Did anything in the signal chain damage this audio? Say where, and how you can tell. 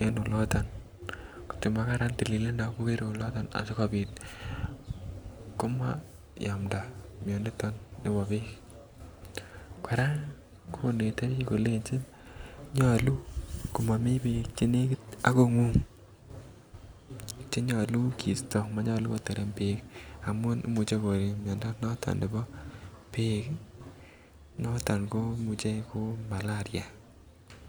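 No, nothing in the signal chain damaged this audio.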